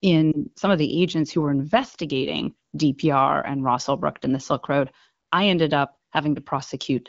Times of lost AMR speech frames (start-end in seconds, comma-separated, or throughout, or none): 0.32-0.38